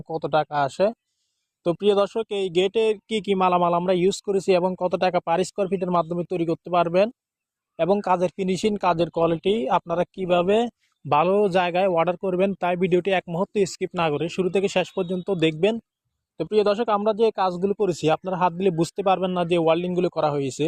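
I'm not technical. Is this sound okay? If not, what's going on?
No. From about 8.58 to 10.58 seconds, the quality drops for two seconds. You may hear a watery or grainy texture. Then the sound snaps back to normal. There is no silence or skip at either point. This is an adaptive stream at a lower bitrate. The connection slowed briefly, so the player switched to a smaller, lower-quality version of the audio to keep playing.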